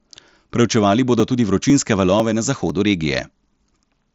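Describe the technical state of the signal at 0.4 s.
At 0.4 s the speech is intact, with no fault, only the normal wideband sound of the Bluetooth mSBC headset codec with nothing above about 7.7 kHz.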